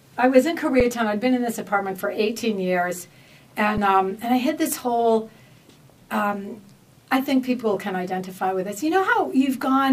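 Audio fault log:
0.80 s and 3.78 s, underrun with held sample: the output buffer runs dry twice, for about 5.8 ms and then 3.9 ms, and the converter just holds its last value until data comes back. The first gap fits a 256-sample buffer. You hear a brief flat stall rather than a hard dropout. Since playback picks up right where it paused, with essentially nothing lost, the restart gives only a soft tick.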